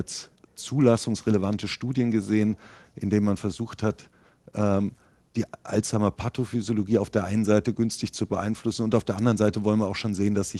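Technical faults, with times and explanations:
Nothing stood out on listening to this speech clip.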